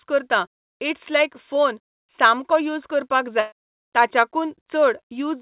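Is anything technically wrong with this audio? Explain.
Yes. In this 4 kHz band-limited G.711 call audio, a burst of packet loss hits from 3.4 to 3.54 s. About 120 ms is missing, and the receiver stretches the last sound and fades it down rather than leaving silence, unlike a plain dropout.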